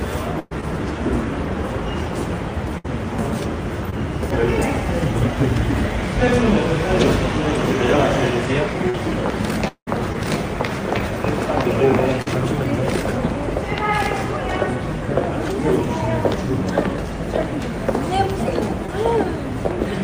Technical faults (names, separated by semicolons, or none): burst of packet loss; short concealed packet loss; repeated packet loss (robotic sound)